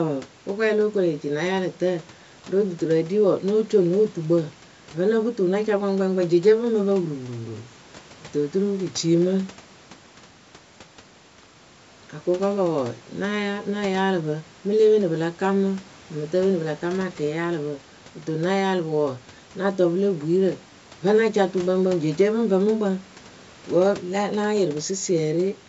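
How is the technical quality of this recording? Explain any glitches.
No glitches are audible; the speech carries the sound of a call microphone chain, with the lowest bass trimmed by its high-pass filter, and that is not a fault.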